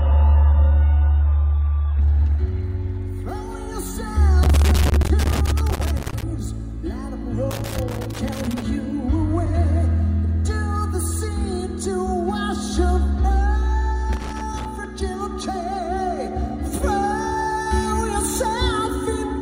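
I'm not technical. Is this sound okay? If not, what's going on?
No. For the first 2 seconds you hear an adaptive stream starting at a low bitrate. The player began on a cheap, low-quality version to start fast, so nothing above 4 kHz comes through and the sound is dull and smeary. At 2.0 s it switches to a better version and clears up instantly, with no gap.

The second problem is loose connector crackle, heard from 4.43 to 6.23 s, 7.51 to 8.62 s and 14.13 to 14.85 s. A worn or dirty plug or socket keeps losing and regaining contact, chopping the signal into bursts of irregular scratching.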